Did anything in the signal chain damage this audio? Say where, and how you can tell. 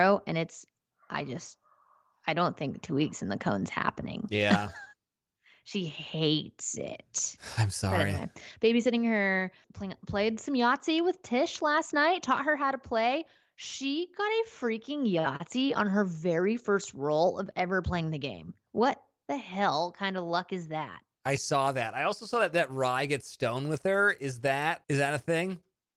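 No, nothing in the chain damaged this speech, and the Opus voice coding, in its hybrid mode at 24 kbps, keeps the full audio band.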